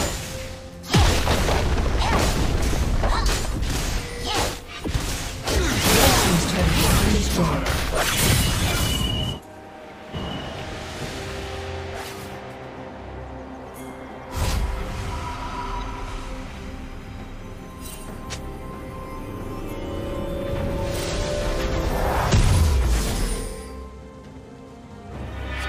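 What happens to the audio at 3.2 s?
Nothing goes wrong at 3.2 s; the audio runs on intact through that moment.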